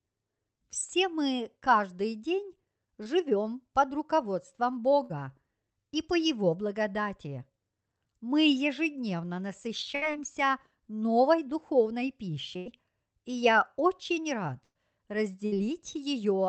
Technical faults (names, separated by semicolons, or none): short concealed packet loss; burst of packet loss